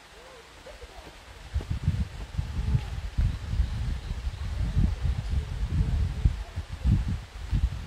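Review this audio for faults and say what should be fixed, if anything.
At 2.51 to 2.55 s the sound jumps forward by roughly 50 ms, consistent with a single skipped frame of about 46.4 ms. Compressed frames were skipped: one frame was missing or rejected as damaged by the decoder. Verify file integrity after encoding and transfer, and re-encode from the source if any frame fails its check.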